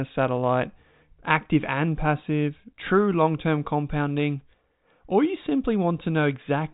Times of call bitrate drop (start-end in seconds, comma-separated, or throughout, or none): none